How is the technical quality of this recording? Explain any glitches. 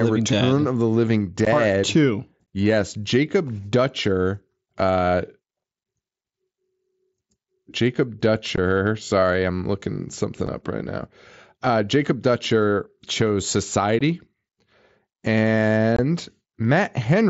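The recording is marred by six brief dropouts, heard through a wideband mSBC headset link that carries speech up to 8 kHz.

The fault is unconcealed Bluetooth headset packet loss, at 1.45, 2.46, 8.56, 10.47, 13.99 and 15.96 to 15.99 s. The 10.47 s gap falls between "I'm looking something" and "up right now". Voice packets between headset and phone went missing, and nothing filled them. Each gap is a hole with hard edges, lasting 7.5 to 22.5 ms. That fits one to three lost 7.5 ms packets. Each one sounds like a short chop in the speech.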